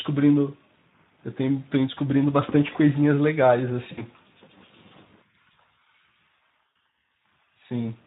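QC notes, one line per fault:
throughout: Speex codec, coding at a rate that fits about 11 kbps, leaves the CELP excitation short of bits, so speech sounds plainly hoarse and noisy.
3.91–4.03 s and 6.70–6.76 s: VoIP packet loss concealed by the speech codec. About 60 ms of audio went missing each time, so the decoder stretched its last pitch and filter with falling gain. That gives a buzzy tone or coloured noise that fades, and the speech stays weak for a moment afterwards.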